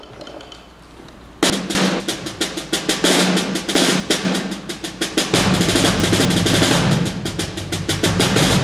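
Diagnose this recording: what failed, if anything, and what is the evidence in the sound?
Chunks out of order at the buffer stage: at 1.5–2.0, 3.75–4.25 and 6.0–6.5 s, two 250 ms chunks swap places, giving jumbled sound. Unlike a dropout, nothing is missing.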